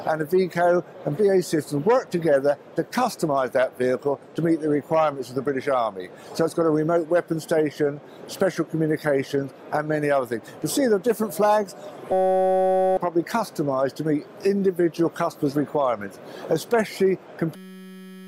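A system hang loop runs from 12.12 to 12.97 s and again from 17.56 s to the end. Each time the machine stalled while the output hardware kept replaying one tiny slice of its ring buffer, about 5.33 ms long, which fits a 256-sample buffer. Repeating that fragment at 188 Hz turns the sound into a steady, rough buzz, and roughly a second of audio is missing, then about 0.7 s at the second stall.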